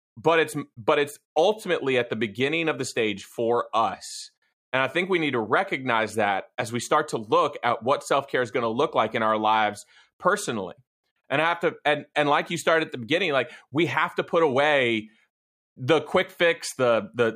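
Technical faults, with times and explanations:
No technical faults occur in this speech clip.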